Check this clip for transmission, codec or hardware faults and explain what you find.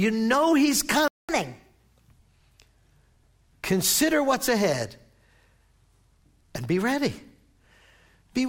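Two linked playback faults occur early in this speech clip: a stall followed by a stretch of sped-up catch-up.

At 1.08 s the speech cuts out and stays silent until 1.29 s, a gap of about 0.21 s, before resuming where it stopped. This playback stall likely comes from the player's buffer running dry or its thread being held up. A dropout from lost packets would skip material or fill the gap with concealment noise. Here nothing is skipped, so the silence simply delays everything after it.

From 1.29 s to about 2.13 s the speech runs at 1.25 times normal speed, with pitch raised by roughly four semitones, and then settles back to normal. This catch-up at higher speed comes from the player resampling its backlog faster to recover the time lost in the stall. Speeding both tempo and pitch together gives the brief chipmunk quality. A time-stretching speed-up would change tempo alone, and clock drift would shift pitch slowly rather than for this short burst.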